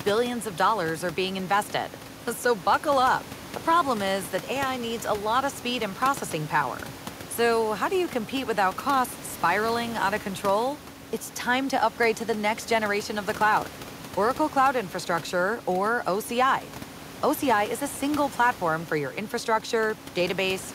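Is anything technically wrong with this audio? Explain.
No, nothing is technically wrong with this audio.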